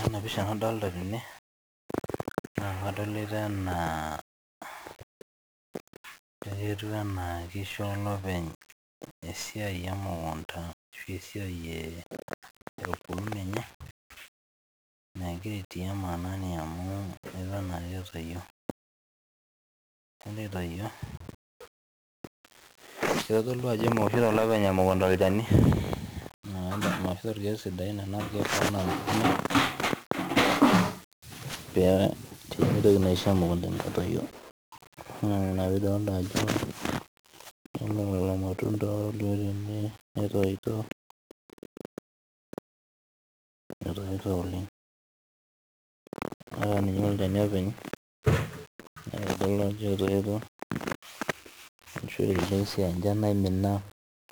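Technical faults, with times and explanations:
Throughout: 1-bit DFPWM compression. The speech is heavily damaged, with a dense fuzzy crackle over every syllable and the upper frequencies swamped by hiss. Each sample carries only a single bit, which nudges an adaptive level up or down rather than recording the waveform's value. The resulting quantisation error spreads broadband across the spectrum and buries detail. The coarseness fits a data rate of about 48 kbps.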